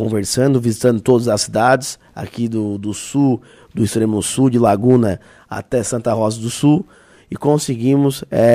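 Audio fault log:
0.86–1.11 s, 1.66–1.75 s, 4.67–4.96 s and 8.40–8.54 s, hard clipping: each loud passage picks up a brief crackly edge on its peaks, a gritty fizz rather than a continuous fuzz. The signal runs about 2 to 3 dB beyond what the stage can pass, so the tops of the waveform are sliced flat, and those squared-off peaks spray extra harmonics high into the spectrum.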